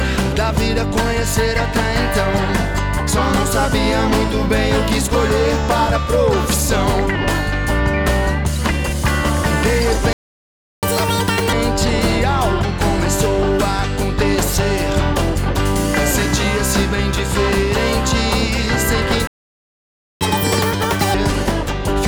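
A playback stall at 10.13 s silences the audio for 0.70 s, likely because the player ran out of data or its thread was blocked. Catch-up at higher speed follows from 10.83 to 11.53 s, with double-speed resampling raising pitch by roughly ten semitones to recover the lost time. A second playback stall at 19.27 s cuts the sound for 0.94 s, likely from the same starved or blocked playback. Catch-up at higher speed runs again from 20.21 to 21.14 s, at double speed and about ten semitones sharp, before settling back to normal.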